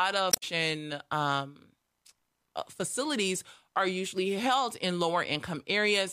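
Damaged data in a compressed stream hits this speech recording between 0.30 and 0.43 s, right at the start. A stretch of the encoded data there is corrupt, so the decoder misreads those frames, loses its place in the bitstream and has to hunt for the next valid frame header before it can resume. For about 0.13 s the sound breaks up, after which normal playback picks up again.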